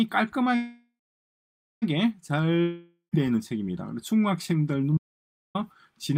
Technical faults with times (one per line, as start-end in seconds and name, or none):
0.55-1.84 call audio freeze
2.62-3.15 long network dropout
4.97-5.55 audio dropout to silence